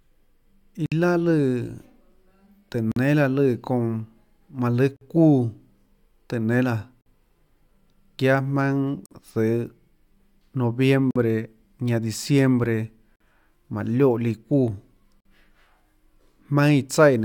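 Gaps at joins of encoded pieces: the speech drops out at 0.86 s for 57 ms, then for 48 ms at 2.92, 4.96, 7.01, 9.06, 11.11, 13.16 and 15.20 s. That's every 2 s, consistent with separately encoded chunks butted together with their encoder start delay and end padding left untrimmed. Each is a short silence with smeared edges before the speech carries on where it stopped.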